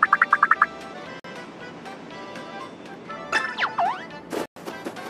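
At 1.20 s the sound drops to silence for about 47 ms, resuming at 1.24 s, and at 4.46 s a longer gap of about 106 ms follows before playback returns at 4.56 s. Both dropouts are clean cuts to silence. This is likely a Bluetooth stall: radio interference delayed packets, the receiving buffer emptied, and output paused until the retransmitted data arrived.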